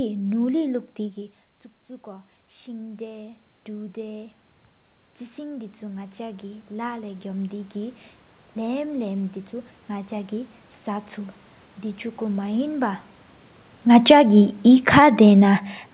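Around 1 s the talker drops back from the mic, the level falls by about 14 dB, and from 1.86 to 4.42 s you can hear the automatic gain rising to make up for it. The control sees a quiet input and pushes its gain up by about 6 dB over two and a half seconds, so the voice and the room noise swell together. It happens again from 5.35 to 8.06 s, another slow climb of about 6 dB over nearly three seconds, with the background coming up right alongside the speech.

Near the end, the talker moves at about 13.5 s. Then from 13.83 to 14.26 s the automatic gain falls by about 5 dB. That's a much quicker pull-down than the earlier rises, and the voice and room noise sink together. All of this rides on a narrowband call path with nothing above 4 kHz, which fits G.711 A-law at 64 kbps.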